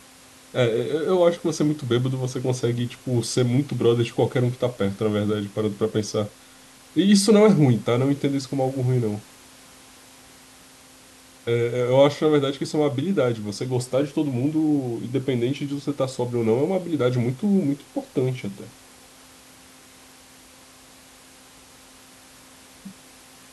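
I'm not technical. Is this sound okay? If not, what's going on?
Yes, no faults here.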